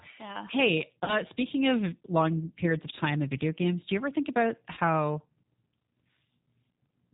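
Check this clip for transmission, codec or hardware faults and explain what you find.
Two faults are present: plainly audible low-bitrate speech coding across the whole clip, and three short dropouts patched over by the decoder.

G.729 codec, throughout: the speech is rebuilt from a vocal tract filter, a pitch predictor and a few pulses per frame, which fits an 8 kbit/s G.729 coder. Nothing above 4 kHz survives, and the voice sounds plainly rough, band-limited and slightly synthetic.

VoIP packet loss concealed by the speech codec, at 1.04 to 1.16 s, 2.65 to 2.68 s and 4.74 to 4.80 s: about 40 ms, 10 ms and 30 ms of audio went missing, and the decoder extended its last pitch and filter settings at falling gain. Each gap becomes a brief buzzy or smeared fade, and each stays weak or distorted for tens of milliseconds past the missing stretch while the decoder recovers.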